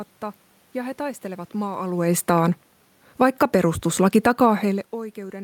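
A speech recording with two automatic gain faults close together. From 3.06 to 3.45 s, automatic gain falling pulls the level down by about 4 dB. The gain control judged the input too loud, or its background noise too strong, and eased its gain back, so the voice and the room noise sink together. Automatic gain rising follows, from 3.35 to 3.83 s, overlapping the fall. The control now judged the input too quiet and raised the gain by about 4 dB. Voice and background swell back up together over roughly half a second. The level changes near 2 s and 4.5 s are different. There, only the voice shifts as the talker moves relative to the microphone, while the background stays steady.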